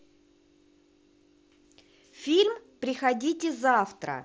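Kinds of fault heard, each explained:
The speech comes through a wideband Bluetooth headset link working as intended, with its band reaching to about 8 kHz and only the light graininess on louder moments that this path normally adds.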